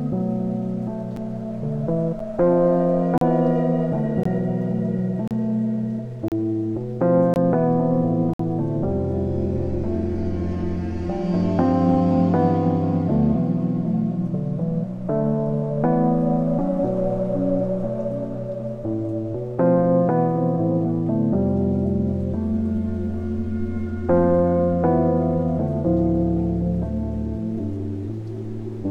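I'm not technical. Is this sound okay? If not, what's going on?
No. The audio arrives in one-second pieces, and the timing of neighbouring pieces doesn't quite line up, leaving a gap between stream segments that the player fills with silence. You hear brief, sharp-edged dropouts at 1.16, 2.19, 3.18, 4.23, 5.28, 6.28, 7.34 and 8.34 seconds, roughly once a second. They last from about 7 to 59 milliseconds, the longest at 8.34 s. Nothing is missing; the sound just pauses and resumes.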